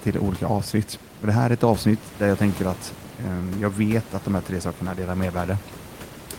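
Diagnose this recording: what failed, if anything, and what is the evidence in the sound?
Nothing failed in this recording.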